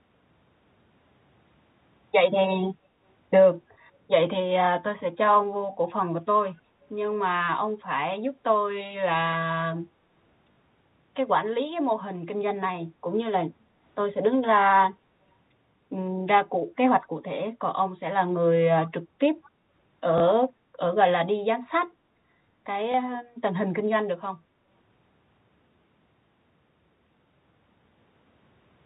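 Packet loss with last packet repeated shows up at 3.74, 10.52 to 10.56, 20.18 and 22.92 s. The receiver replays the previous 20 ms chunk, and the 40 ms gap at 10.5 s gets a brief robotic stutter.

Around 18.86 and 19.45 s there's a faint copy of the speech trailing by about 201 ms, roughly 25 and 35 dB below it. That's likely an echo leak from a loudspeaker one side's canceller didn't fully catch, sitting inside the telephone-band G.711 sound.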